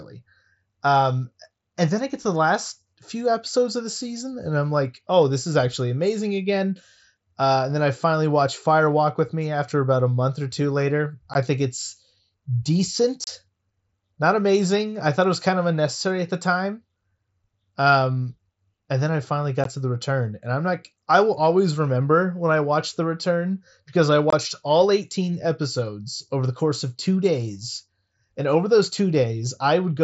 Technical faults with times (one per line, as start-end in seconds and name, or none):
11.34 unconcealed Bluetooth headset packet loss
13.24-13.27 unconcealed Bluetooth headset packet loss
19.64 unconcealed Bluetooth headset packet loss
24.30-24.33 unconcealed Bluetooth headset packet loss